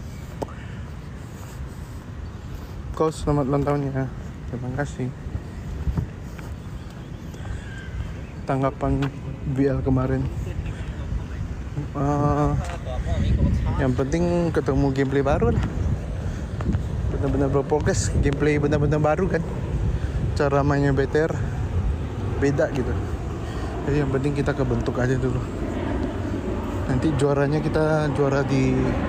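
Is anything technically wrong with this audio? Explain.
No, nothing is technically wrong with this audio.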